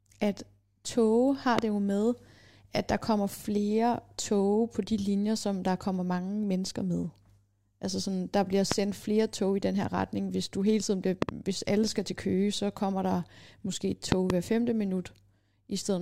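A loud pop hits at 1.59–1.61 s, again at 8.72–8.74 s between "sådan der bliver" and "flere tog i den", as a double pop at 11.22–11.31 s between "du hele tiden bliver" and "alle skal til", and as another pair at 14.12–14.32 s after "kommer der måske et". Each is a sharp thump well above the speech, likely from a voltage pulse such as static or a switch. The speech underneath continues through.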